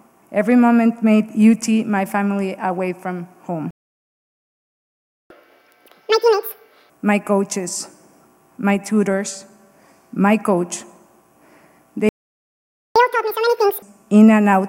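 Playback stall at 3.71 s: the sound cuts off mid-flow and the output stays silent for about 1.6 s, until 5.30 s. The likely cause is the player running out of buffered data, or its audio thread being blocked, so nothing reached the output until it recovered. At 5.30 s the sound resumes with a catch-up at higher speed. For 1.6 s, to 6.90 s, the backlog plays at twice normal speed, resampled rather than time-stretched, so the pitch jumps up by around ten semitones and the sound takes on a hurried, chipmunk-like quality. At 6.90 s both speed and pitch drop back to normal.

A second playback stall hits at 12.09 s, a shorter gap of about 0.87 s of silence, likely from the same data starvation or blocked thread. When the sound returns at 12.96 s it again runs at double speed, raised by around ten semitones, for 0.87 s while the player recovers the lost time, then settles back to normal speed and pitch at 13.82 s.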